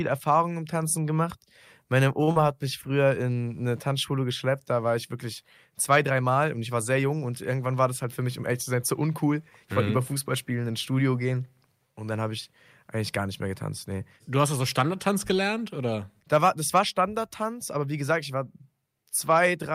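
At 2.23 s the sound hangs for a moment, one speech sound held about 40 ms too long, with a faint buzz or dip before it picks up where it left off, finishing by 2.29 s. This is a short stall from a late packet: the packet missed its playout time, the jitter buffer ran dry, and the receiver kept stretching the last sound until it arrived. Nothing is lost, but everything after it now plays about 39 ms later.

Right after, from 2.31 s to 2.37 s, there is a brief smear or wobble, and about 40 ms of the actual speech is simply gone. This is short concealed packet loss. That stretch never reached the decoder in time, so the receiver carried the previous sound forward for about 41 ms, holding its pitch if voiced or substituting shaped noise if not, then crossfaded back into real audio.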